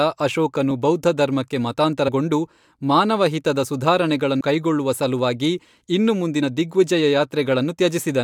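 Compressed frames skipped occur three times in this speech. At 2.07 to 2.09 s, just after "ಅಶೋಕನು ಬೌದ್ಧಧರ್ಮಕ್ಕೆ", about 40 ms of audio goes missing. At 4.40 s, right before "ಕೈಗೊಳ್ಳುವ ಸಲುವಾಗಿ ಇನ್ನು", roughly a tenth of a second vanishes. At 6.42 s, after that same phrase, about 20 ms drops out. The lost audio at each point fits whole compressed frames the decoder never played, around 20 ms each.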